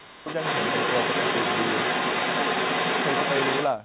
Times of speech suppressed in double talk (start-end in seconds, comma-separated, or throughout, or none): 0.00-0.27